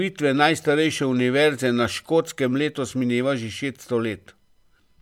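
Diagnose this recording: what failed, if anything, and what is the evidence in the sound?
Nothing in the signal chain has failed: the speech is continuous and stable in level and timing, with no audible damage at any stage between capture and playback.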